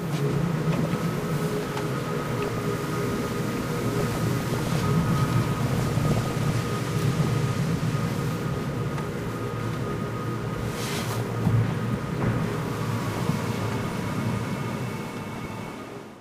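DAB burbling runs through this recording of sound at 2.02–2.66, 3.98–4.89, 5.62–6.60, 10.38–11.38, 13.14–14.10 and 15.35–16.01 s. Weak reception let bit errors, up to roughly 1 percent, slip past error correction into the MP2 stream, corrupting samples within individual sub-bands and producing short blips of noise.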